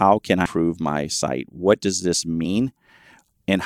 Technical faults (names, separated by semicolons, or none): damaged data in a compressed stream